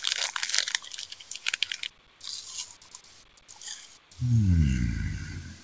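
From 2.76 to 3.22 s the sound is cut by the noise suppressor: it mistook this stretch for background noise and pulled it down by about 14 dB, so the sustained part sinks and its tail fades early for roughly four tenths of a second. Unlike a packet-loss dropout, the sound never goes silent or glitches, and sharp onsets survive while steadier content dims. The band stops at 8 kHz, which fits a wideband call codec such as G.722.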